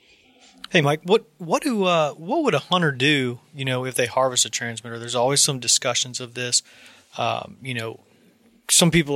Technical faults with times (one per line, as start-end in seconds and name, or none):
none